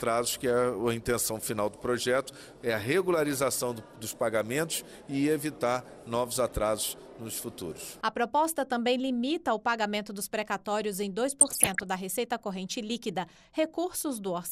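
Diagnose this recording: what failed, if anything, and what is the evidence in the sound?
At the codec stage, likely MP2 compression at a starved rate, around 80 kbps, shuts off upper sub-bands. Throughout, the sound is dull, flickering and gurgling.

In reception, uncorrected bit errors reached the MP2 data, causing DAB burbling. From 11.39 to 11.83 s, short noise blips hit single sub-bands.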